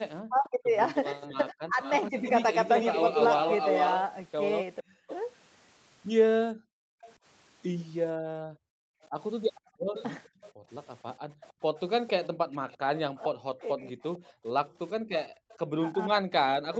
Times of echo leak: 1.82-16.79

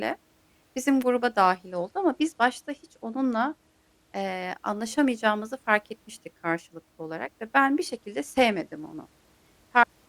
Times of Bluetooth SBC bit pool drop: 1.69-4.22, 7.88-10.08

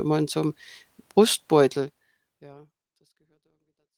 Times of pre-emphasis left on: none

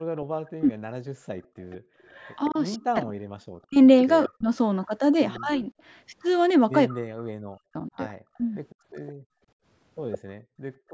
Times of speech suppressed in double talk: 0.54-0.78, 2.50-5.65, 6.88-8.41

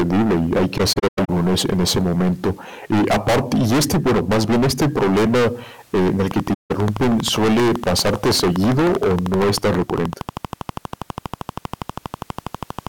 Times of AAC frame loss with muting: 0.77-1.29, 6.53-6.71

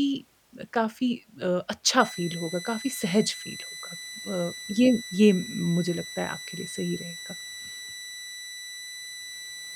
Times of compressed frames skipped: none

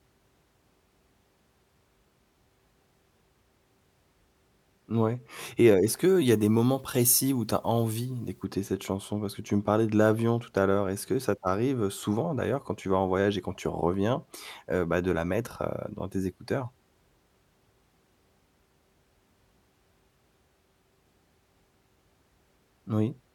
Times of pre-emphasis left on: 6.02-8.44

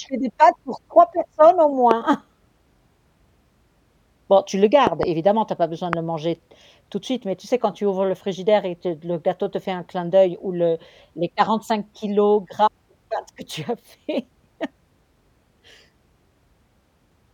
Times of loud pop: 1.91-1.93, 4.87-5.05, 5.93-5.95

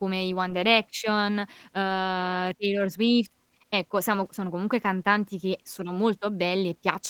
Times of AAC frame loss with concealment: none

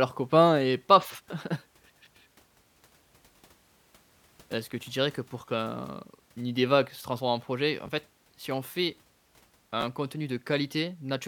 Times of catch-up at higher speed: none

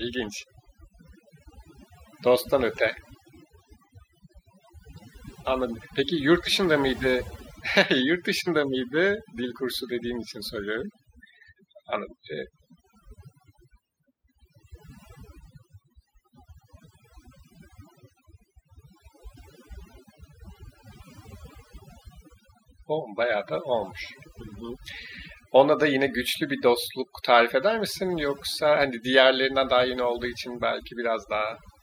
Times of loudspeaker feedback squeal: none

